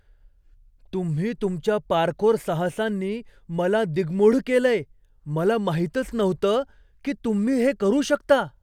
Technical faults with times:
none

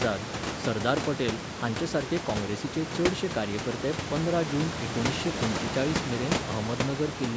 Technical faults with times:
none

